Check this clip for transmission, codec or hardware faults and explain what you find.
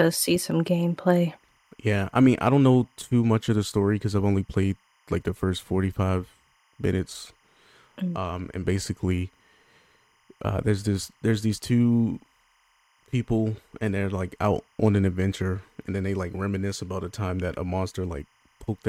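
One fault runs through the whole recording: timecode bleed. A faint, steady chirping warble sits far beneath the speech, around 40 dB down, flipping between pitches near 1 kHz and 2 kHz. It is linear timecode at 25 frames per second leaking in from a neighbouring track or cable.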